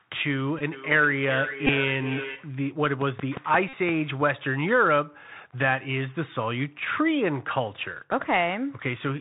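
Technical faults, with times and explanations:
Throughout: Bluetooth CVSD headset codec. The speech is squeezed through the narrowband headset codec, so nothing above 4 kHz survives, and the damage is plainly audible. S sounds turn scratchy, loud bright passages distort where the one-bit up/down step can't keep pace, and a granular hiss sits under everything. On a spectrogram there is a hard ceiling at 4 kHz with a grainy noise floor below it. The waveform shows slope-limited, staircase-like edges on loud peaks.
0.59–0.61 s, 1.67–1.70 s and 3.69–3.73 s: Bluetooth headset packet repeated. Each time, lost voice packets were filled by decoding the previous packet again. That produces a short buzz near 267 Hz, the rate of 3.75 ms packets. The gaps last about 15 ms, 19 ms and 45 ms, and the last fits a run of around a dozen packets. On a waveform, an identical 3.75 ms segment repeats. On a spectrogram, a brief band of 267 Hz harmonics appears.
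0.72–2.61 s: feedback echo between two devices. A second device on the same call replays the audio, and this microphone picks it up again. The sound returns roughly every 0.4 s, thinner and more ringing each pass, at about 9 dB below the speech at its loudest. The spectrogram shows weaker copies of each syllable shifted right by that interval, and on the waveform they appear as smaller repeated envelopes.
3.01–3.90 s: train of clicks. About seven similar clicks arrive at a regular 5.73 per second and peak around 10 dB above the signal. They are heard as steady ticking over the sound, and the likely cause is interference from nearby equipment or a faulty connection or power supply. On a waveform they are evenly spaced sharp spikes. On a spectrogram they are thin vertical lines running across the band.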